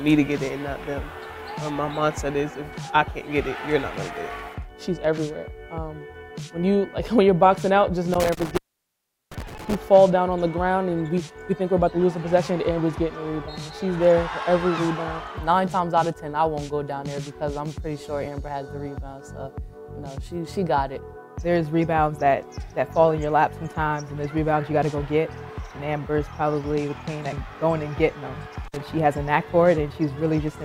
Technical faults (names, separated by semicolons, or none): intermittent contact